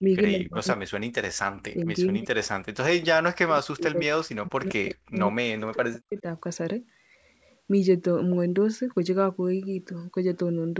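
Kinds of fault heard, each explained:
Speech suppressed in double talk: while both sides spoke at once, the echo canceller likely could not tell this talker apart from loudspeaker echo, so it turned everything down. The speech sinks by as much as about 40 dB, nearly vanishing, from 0.36 to 1.42 s, 2.09 to 2.49 s, 3.05 to 5.15 s and 5.56 to 6.27 s. A shallower dip of about 10 dB follows from 1.73 to 1.87 s.
Echo leak: the echo canceller on the loudspeaker side likely left part of its microphone pickup uncancelled, and that residue was sent back into the call. Between 1.8 and 1.86 s a brief scrap of the speech returns 171 ms late, faint at about 30 dB below the speech. It comes across as a quick ghostly repeat, overlapping the shallow dip at that moment.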